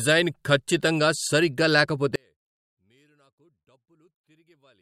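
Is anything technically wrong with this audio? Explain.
Yes. Right after "ఖచ్చితంగా సరిగ్గా", at 2.16 s, the speech falls by about 40 dB in mono and stays almost gone to the end. That's likely one channel inverted. With one side's polarity flipped, the centred voice cancels on summing, leaving only a faint trace.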